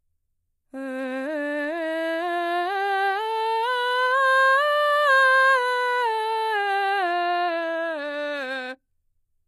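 A music clip with plainly audible codec damage from start to finish. The top octave is gritty and metallic rather than clean. Its harmonics do not line up with the fuller sound below. Above 14.7 kHz there is nothing at all. The likely cause is HE-AAC compression. Only the lower spectrum is properly coded. The treble is rebuilt by copying lower bands upward under a coarse envelope. The damage fits a low bitrate, around 24 kbps.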